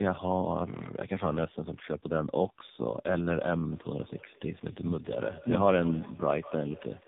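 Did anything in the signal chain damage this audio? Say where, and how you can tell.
Yes. Throughout the clip, tandem speech coding at the codec stage: the speech is rough, muffled and warbly, with nothing above 3.8 kHz. That fits two low-rate speech coders in a row, such as G.723.1 then AMR-NB, each re-encoding the other's already degraded output.

From 3.71 s to the end, there is feedback echo between two devices at the call processing stage. Each phrase returns at intervals of around a fifth of a second, thinner and more ringing, peaking about 15 dB below the speech. A second device's loudspeaker is feeding a microphone whose echo canceller cannot remove it.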